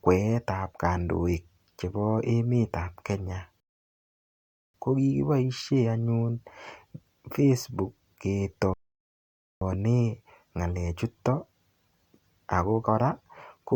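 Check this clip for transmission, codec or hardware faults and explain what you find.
Two rebuffering stalls interrupt the speech. The first runs from 3.60 to 4.74 s and adds 1.14 s. The second runs from 8.74 to 9.61 s and adds 0.88 s. In each, playback drained its store of downloaded audio and halted until fresh data arrived. The sound drops abruptly to silence. It then picks up at the exact point where it stopped. No audio is skipped. The stalls only stretch the clip's running time.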